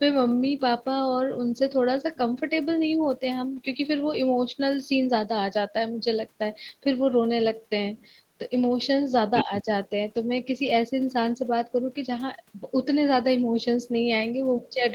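An echo canceller likely failed to remove the loudspeaker signal from 9.34 to 9.44 s, so the other side's voice leaking through sits only about 5 dB below the speech. Immediately after, from 9.44 to 9.65 s, both sides talking at once likely led the canceller to turn everything down: speech suppressed in double talk, dipping by around 10 dB for roughly a tenth of a second in total.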